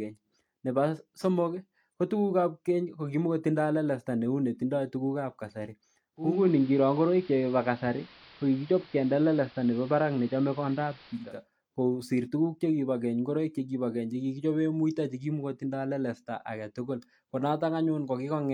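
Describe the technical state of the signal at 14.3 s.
At 14.3 s the speech signal is intact, with no technical fault at that point.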